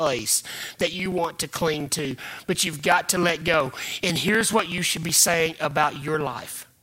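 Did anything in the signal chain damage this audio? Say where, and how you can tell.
Yes. Periodic USB or driver dropouts damaged this speech at the driver or buffer stage. Something is stalling the USB bus or the audio driver every 0.062 s, about 16 times a second, from 0.07 s to 6.77 s. Each stall skips a couple of milliseconds of audio rather than filling the gap with silence, so the waveform jumps ahead. That leaves a steady train of small ticks that sound only while the voice is present and vanish in pauses.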